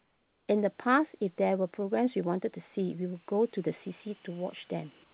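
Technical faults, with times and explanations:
0.00 to 0.48 s: comfort noise in place of the background. The real background becomes a flat, featureless hiss about 6 dB quieter, likely synthetic fill during a transmission pause.
5.04 s to the end: comfort noise in place of the background. The last 0.1 s turns to steady, detail-free noise about 4 dB lower, likely receiver fill while the sender stops transmitting.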